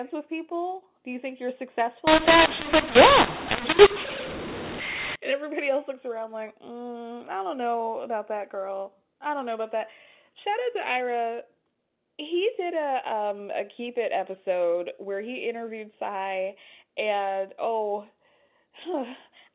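From 2.07 to 5.16 s, after "you think you're" and before "and everybody else looks", the speech turns harsh and gritty because of mu-law and A-law mixed up: the mu-law telephone samples were decoded as A-law, scrambling levels. Unlike clipping, quiet gaps fill with hiss.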